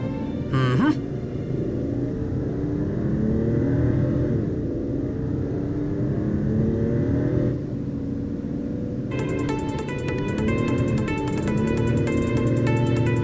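Listening through the clip, nothing stood out as a fault at any point.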